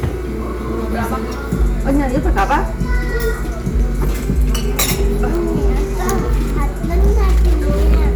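Hard clipping runs through the whole clip. The level is driven about 8 dB past what the stage can pass, so a few percent of samples are sliced flat. The waveform shows squared-off peaks, the spectrogram shows harmonic smear reaching high up, and peaks crackle with a harsh edge.

From 4.04 s to 4.83 s the sound plays about 5.6% fast and rises 94 cents, almost a semitone, then snaps back. This sudden detuning fits a drift correction step, likely clock-matching software changing rate to rebalance its buffer. Spectrogram partials jump up, then drop.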